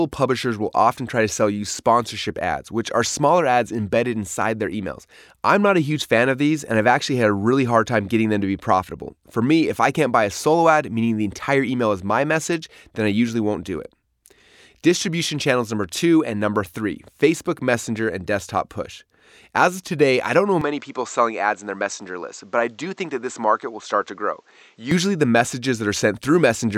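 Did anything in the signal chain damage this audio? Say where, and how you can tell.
Yes. From 20.61 to 24.91 s the speech loses everything above 8.2 kHz and picks up a new noise floor roughly 45 dB down, with no gap and little level change. This is likely an input switched to a poorer device at the driver stage, changing the band limit and noise.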